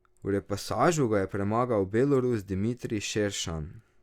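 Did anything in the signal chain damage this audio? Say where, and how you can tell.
No, nothing in this speech clip shows signal-chain damage.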